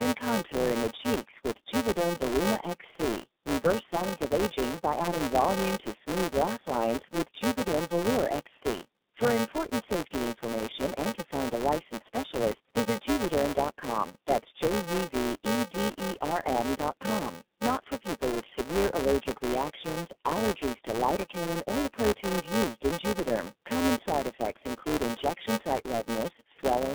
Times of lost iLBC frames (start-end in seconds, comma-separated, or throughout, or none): none